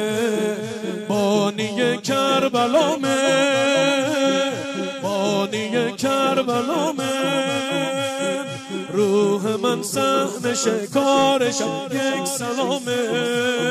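No technical faults can be heard anywhere in the clip.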